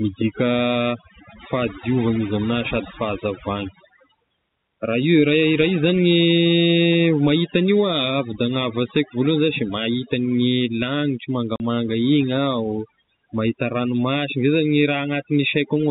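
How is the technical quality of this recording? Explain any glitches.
The recording has two technical faults: heavy-handed noise suppression across the whole speech clip, and one brief dropout late on. The telephone-band sound, with nothing above 4 kHz, is consistent with G.711 coding.

Overdone noise removal affects the entire clip. The noise reducer was set too aggressively, so it pulls individual frequency bands down or mutes them whenever they sit close to its noise estimate, removing low-level speech detail along with the hiss. The background drops to near silence flecked with twinkling artefacts.

Packet loss filled with silence occurs from 11.56 to 11.6 s. Audio went missing in transit and the receiver substituted silence, leaving a 40 ms hole, which fits two lost 20 ms packets. The gap has abrupt edges, and the speech is briefly chopped.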